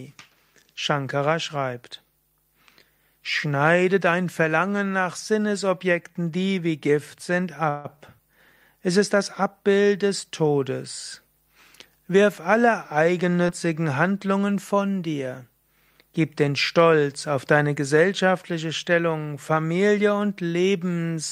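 Speech, with three timing faults. At 7.69 to 7.98 s the sound stalls and is stretched into a fading buzz for about 151 ms. This is likely a call audio freeze. Delayed packets emptied the jitter buffer, and the audio then resumed where it stopped, so nothing is lost but the delay grows by about 151 ms. From 12.06 to 13.32 s the speech hurries at an unchanged pitch. This is jitter buffer speed-up. The receiver trimmed many tiny pitch-period slices, about a tenth of a second in total, to run at 106% and cut the built-up delay. At 13.47 to 13.50 s there is a brief smear. This is short concealed packet loss. About 20 ms of audio missed the decoder, and the receiver covered the gap by extending the preceding sound before blending back in.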